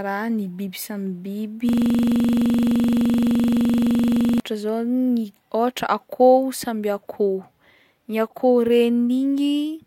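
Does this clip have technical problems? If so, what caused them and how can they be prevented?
Yes. Right after "ny biby samy biby", from 1.69 to 4.40 s, the speech freezes into a rapid stutter near 23.4 Hz: a 42.67 ms slice repeats 63 times until "zao ny akôho samby". This is a system hang loop: the host stalled while the audio hardware kept replaying one ring buffer, which fits a 2048-sample buffer. Preventing it means fixing the driver or system stall and adding a watchdog that mutes the output whenever the buffer stops being refilled.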